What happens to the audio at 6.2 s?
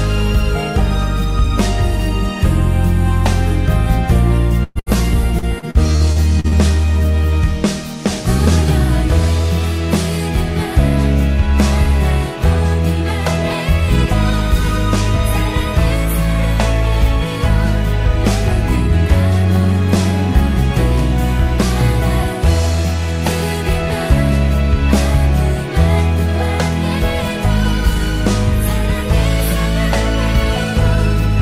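Repeated packet loss (robotic sound) runs from 5.39 to 6.55 s. Seven short gaps, up to 41 ms each, are patched by stretching earlier sound. The result is choppy and robotic.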